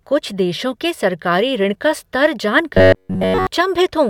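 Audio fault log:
2.74 to 3.47 s, robotic sound from repeated short buffers: just after "ऋण का स्तर जान" the speech collapses into a rigid metallic buzz at about 94 Hz that only loosely tracks the syllables. The likely cause is that fresh audio stopped arriving in time, so playback looped the last slice of roughly 10.7 ms over the whole stretch, which repeats essentially throughout. Unlike a dropout there is no silence, and unlike a pitch shift the tone stays fixed rather than following intonation.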